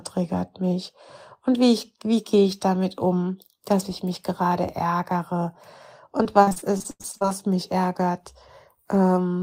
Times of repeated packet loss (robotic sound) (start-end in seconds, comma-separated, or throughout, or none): 6.23-7.29